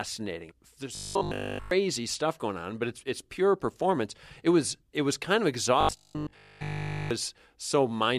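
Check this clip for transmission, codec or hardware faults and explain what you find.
Two stretches of robotic sound from repeated short buffers occur: 0.95–1.71 s, just before "stuff going on but", and 5.81–7.11 s, after "it was kind of". Both become a rigid 50 Hz buzz, likely one 20 ms block looping while nearly all real audio is skipped. A spectrogram shows evenly spaced 50 Hz harmonic lines, and the waveform repeats an identical 20 ms cycle.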